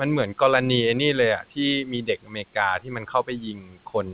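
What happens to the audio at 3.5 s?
At 3.5 s the speech is being cut by the noise suppressor, from 2.79 s to the end. The suppressor takes parts of the speech for background, which rises around 3 s, and turns them down by as much as about 19 dB. Consonants and endings sound swallowed and faint. Unlike a dropout, the sound thins rather than breaking into silence.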